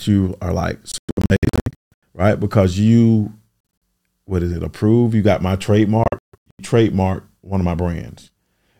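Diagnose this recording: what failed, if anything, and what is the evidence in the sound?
Packets on the wireless link to the headphones were likely arriving late and being discarded, a Bluetooth dropout. The speech cuts to silences, up to about 170 ms each, at 0.92–1.93 s after "you are like", 3.60–3.82 s before "what is it", and 6.04–6.61 s between "got my" and "trademark one of my". It then resumes as though playback had continued through the gaps.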